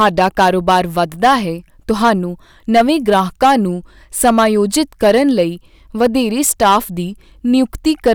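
Hard clipping runs throughout the speech: driven about 9 dB past full scale, roughly three percent of samples are flattened, distorting the peaks of loud syllables.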